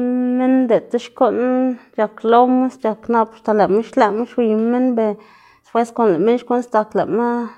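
No technical faults can be heard anywhere in the recording; the speech signal stays continuous and steady throughout.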